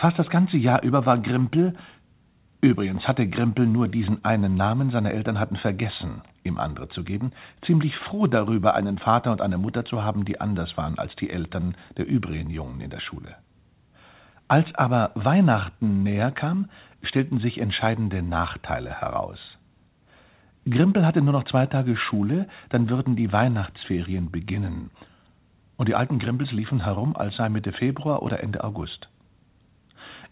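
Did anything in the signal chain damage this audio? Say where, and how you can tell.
No, nothing in the signal chain damaged this audio. It came through a call path with nothing above 4 kHz, a narrowband limit that fits G.711 A-law at 64 kbps working as designed.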